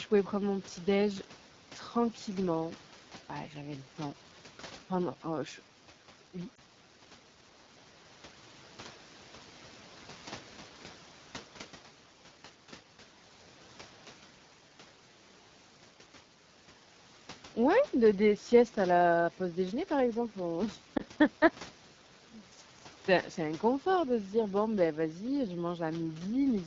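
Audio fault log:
Throughout: AMR wideband (HD Voice) codec. Speech sounds rough and raspy, because at 8.85 kbit/s the pulse-driven vocal tract model gets too few bits to shape the voice cleanly, and the band above 6.4 kHz is only filled with shaped noise.
6.55 s and 20.97 s: lost AMR speech frames. Each time there is a brief dip or warble in the speech lasting about 20 ms. One frame failed its checksum, so the decoder repeated the previous pitch and vocal tract settings at lower gain before the following frames decoded normally.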